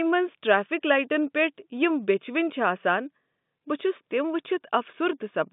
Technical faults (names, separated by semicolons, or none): none